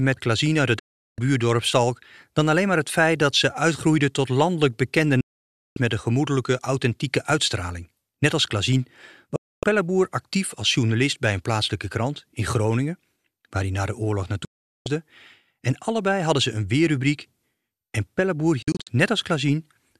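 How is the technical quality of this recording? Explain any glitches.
The speech is interrupted by five digital broadcast dropouts. They start at 0.79 s after "uit het", at 5.21 s after "uitgroeide tot landelijk bekende", at 9.36 s, at 14.45 s after "hij na de oorlog", and at 18.62 s. The receiver stopped getting valid frames and muted. Each gap fades down in about 3 ms. Gaps run 0.25 to 0.56 s. The last one breaks into several short holes across 0.24 s. Speech resumes with "met een gemoedelijke authentieke" after the second one. Whatever was said inside each gap is gone.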